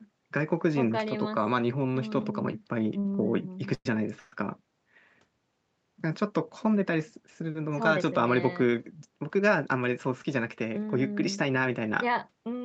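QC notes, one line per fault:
2.99 s, short stall from a late packet: the sound is held about 50 ms too long while the buffer waits, with a slight buzz or dip and nothing lost.
3.74–3.86 s and 4.19–4.33 s, call audio freeze: the last sound continues as a fading buzz or hiss for 108 and 129 ms, likely from delayed packets. The first ends in about 40 ms of silence.
9.66–10.66 s, jitter buffer speed-up: audio plays about 8% fast at the same pitch, as roughly a tenth of a second of pitch periods is trimmed. It sounds hurried.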